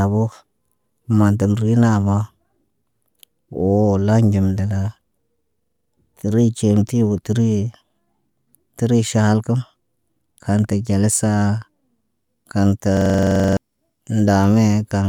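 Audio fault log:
5.63–5.89 s, system hang loop: the system stalled while the audio hardware kept replaying its ring buffer, so one 43 ms slice repeats six times at 23.4 Hz, a length that fits a 2048-sample buffer. The result is a rapid machine-gun stutter, and roughly a third of a second of speech is lost.
12.97–13.57 s, system hang loop: a longer stall cycles the same 43 ms buffer fourteen times, stuttering for longer and dropping about 0.7 s of speech.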